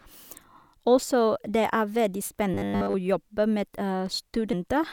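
From 2.54 to 2.94 s the speech turns into a rigid, metallic buzz at 100 Hz, the robotic sound from repeated short buffers. Nearly all of that stretch is 10 ms chunks looped over and over, likely because new audio arrived too seldom.

At 4.53 s compressed frames are skipped. The decoder drops about four 32 ms frames, so the speech jumps ahead by roughly 150 ms.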